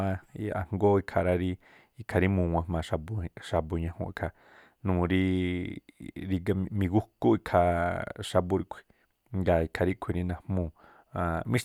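A speech recording with no audible technical faults.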